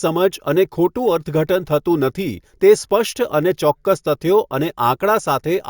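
Throughout the speech there is imaging from sample-and-hold upsampling: the audio was raised from 16 kHz to 48 kHz by repeating each sample with no smoothing filter, so mirrored copies of the spectrum leak above the original band. The first image fills 8 to 16 kHz at about 22 dB below the signal, heard as a bright metallic fizz that tracks loudness. A spectrogram shows the speech pattern reflected upside-down above 8 kHz; the waveform looks like tiny staircase steps.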